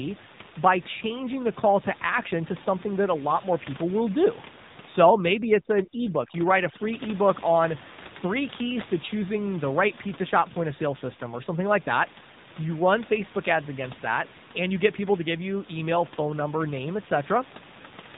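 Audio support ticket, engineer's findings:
AMR narrowband mobile codec throughout: buzzy, synthetic speech, nothing above 3.8 kHz. Pulse-driven vocal-tract model at a low rate, likely near 7.4 kbps. A plain band-limit filter wouldn't add this buzz.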